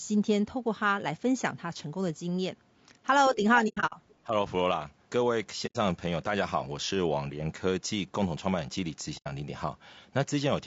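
The whole speech clip has a rough, grainy texture with noise between the harmonics and a dulled top, likely low-delay AAC compression (AAC-ELD) running at a low bitrate, somewhere around 32 kbps.

From 3.35 to 3.44 s the talker dips by a few dB for about a tenth of a second, likely speech suppressed in double talk, with the echo canceller ducking everything while both sides overlap.

Then comes AAC frame loss with muting between 3.68 and 3.94 s: about 180 ms of sound goes missing in scattered soft-edged holes, the longest around a tenth of a second. The muted frames fade out and back in.

At 4.09 to 4.15 s there's a faint scrap of the other side's voice leaking through, very far below the talker. The echo canceller likely didn't fully scrub the loudspeaker signal.

Another brief dip of a few dB follows at 4.26 to 4.33 s, likely suppression in double talk.

Two more frame-loss gaps of about 90 ms each land at 5.66 to 5.76 s and 9.17 to 9.27 s, again as smooth, soft holes.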